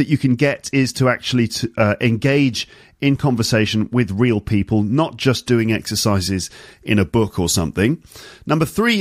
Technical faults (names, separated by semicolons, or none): pre-emphasis left on